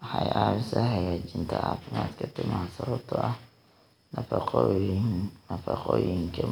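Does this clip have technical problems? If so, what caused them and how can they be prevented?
No, nothing in this speech recording points to a technical fault, so there is no cause to trace and nothing to prevent.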